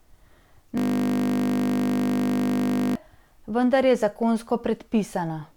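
Speech clip with a system hang loop from 0.78 to 2.95 s. A 20 ms slice repeats about a hundred times. It sounds like a steady 50 Hz buzz. The system froze while the sound hardware kept replaying the same short buffer.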